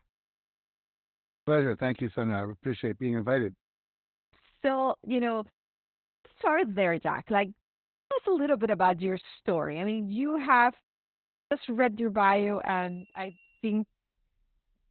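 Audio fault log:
throughout: Opus voice compression, running at 8 kbps in SILK narrowband mode with 20 ms frames; nothing above 4.3 kHz survives, leaving speech muffled, hoarse and slightly robotic.
1.23, 4.09, 5.99, 7.87, 11.29 s: clipped start after a pause; the output device wakes late and swallows about 0.22 to 0.26 s of each onset, after "I appreciate being invited", between "you know" and "start there", and between "I mean you have" and "read your".
12.16 to 13.91 s: loudspeaker feedback squeal; a 5.3 kHz tone swells over roughly a second to about 5 dB above the speech as the mic-speaker loop exceeds unity gain.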